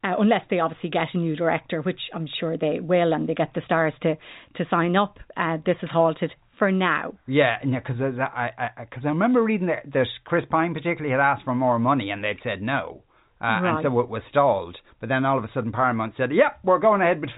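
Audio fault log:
No faults to log for this speech clip.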